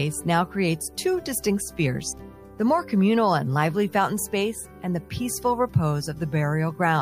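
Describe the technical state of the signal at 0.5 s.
At 0.5 s the signal is intact, with no dropout, distortion or other technical fault audible at that point.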